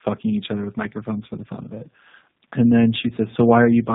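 From start to finish the speech carries tandem speech coding. It sounds like it went through two low-rate speech codecs in a row, something like AMR-NB followed by G.729A, decoded and re-encoded at a network border in between. The second coder is working on the first one's already mangled output, so the artefacts stack. You get a rough, muffled, warbly quality, and nothing comes through above about 3.8 kHz.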